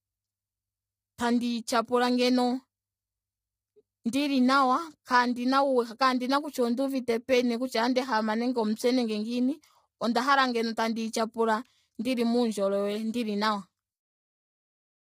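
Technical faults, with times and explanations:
Throughout, low-delay AAC compression: the speech was likely squeezed through AAC-ELD at a low rate, which fits about 24 kbps. Its short frames blur pitch harmonics, so the voice sounds heavily rough and grainy, with noise filling between harmonics and a synthetic-sounding top band.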